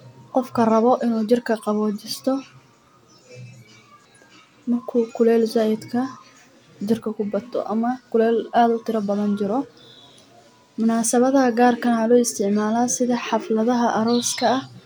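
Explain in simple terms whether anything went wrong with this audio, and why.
Nothing went wrong here: the speech is intact throughout, with no audible faults at any point.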